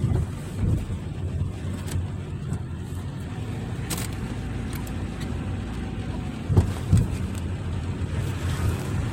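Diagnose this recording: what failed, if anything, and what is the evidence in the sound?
The codec stage failed: corrupt frames were decoded and played rather than concealed, so misread codes and gains put energy at wrong frequencies. This is a corrupt frame decoded. It causes a burst of misplaced energy from 4.70 to 4.77 s, peaking about -20 dBFS, and a brief one at 6.14 s near -25 dBFS.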